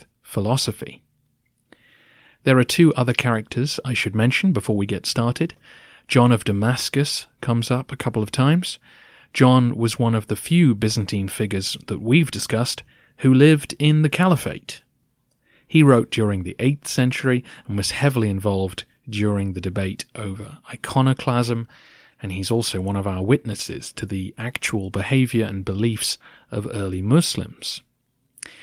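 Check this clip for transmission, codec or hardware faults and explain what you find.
No faults found on listening; nothing in the recording needs flagging.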